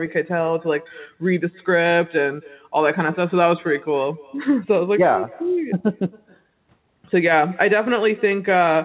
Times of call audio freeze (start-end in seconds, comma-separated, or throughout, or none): none